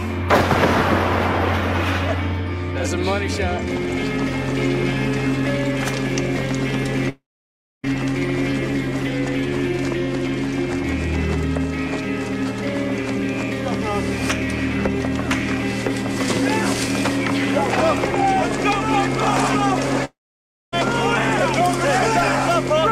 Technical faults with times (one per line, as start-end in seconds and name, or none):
7.09-7.89 long network dropout
20.05-20.74 long network dropout